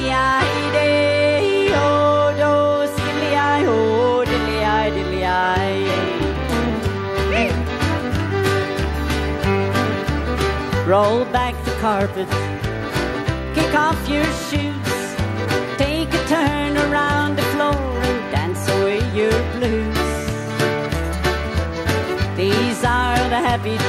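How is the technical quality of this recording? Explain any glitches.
The technical quality of this recording is sound, with no glitches to explain.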